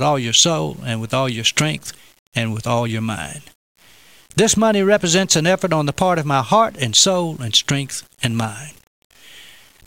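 Speech with grainy, signal-dependent distortion running the full length of the clip, sitting roughly 35 dB below the level. Quiet syllables and decays turn gritty or sputter toward silence, consistent with low bit depth without dither, likely 8-bit rounding.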